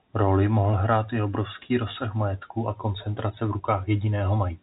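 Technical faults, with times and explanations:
Nothing here counts as a technical fault; the speech comes over a G.711 mu-law telephone line at 64 kbps, so everything above about 3.8 kHz is simply gone, as you'd expect from a phone call.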